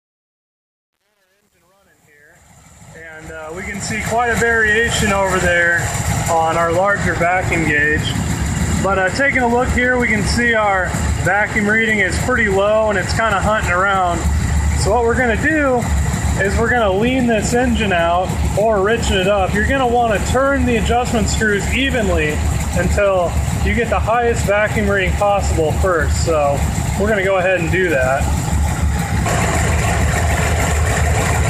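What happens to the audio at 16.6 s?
Nothing goes wrong at 16.6 s; the audio runs through that moment intact, with no dropout, click, distortion or other fault.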